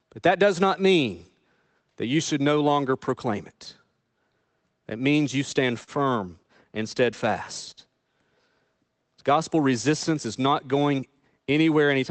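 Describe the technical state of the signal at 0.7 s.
At 0.7 s the speech comes through intact, with no fault present, only the ordinary band-limited character of the Opus call path that carries it.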